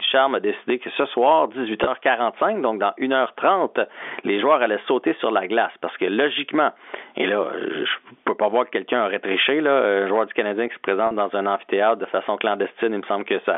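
Gain pumping runs through the whole speech clip. The gain swings by about 15 dB and is pulled down under every loud syllable, most likely because the gain is set too high and a fast limiter clamps it. On the waveform the envelope looks flattened. At 1.84 to 1.87 s and again at 11.07 to 11.11 s, 30 ms and then 40 ms are lost to packet loss with pitch repetition, which fits losses of three and four 10 ms packets. The receiver repeats the last pitch period, so each gap sounds like a brief buzzy hold. On a spectrogram the harmonics run unnaturally steady for that stretch, and the waveform shows identical repeated cycles. The G.711 telephone band, cut off above 3.5 kHz, remains visible as an empty top to the spectrogram.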